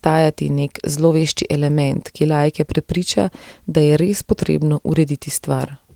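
Nothing goes wrong technically in this speech recording. It carries full-band Opus voice compression at 20 kbps in hybrid mode, and the coding leaves only a light trace on the sound.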